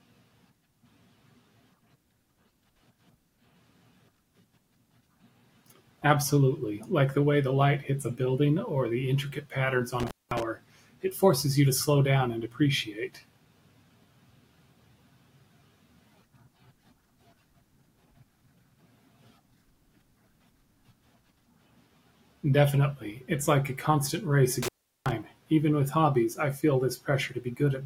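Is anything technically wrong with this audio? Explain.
Yes. The speech has two dropouts from an intermittent contact: one from 10.00 to 10.43 s, with the line open for about 0.21 s, and one from 24.63 to 25.12 s, open for about 0.38 s. A loose plug or cable breaks the connection, so the signal vanishes, leaving faint hiss, with crackle where the contact scrapes open and closed. On the waveform each event is a near-flat gap bounded by jagged spikes. The spectrogram shows thin vertical broadband streaks at the edges around a dark, low-level gap.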